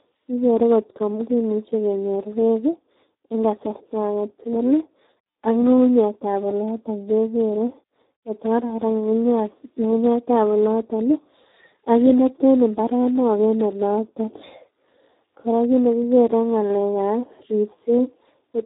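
From start to finish the speech carries Speex codec damage, and it is heavy. Everything above 3.9 kHz is gone, and the remaining band sounds hoarse, noisy and edged toward robotic, which fits a narrowband setting near 8 kbps starved of excitation bits. A plain low-pass filter would dull the sound but leave it clean. Here the grainy, buzzy texture inside the passband shows the coder itself rebuilding the voice poorly.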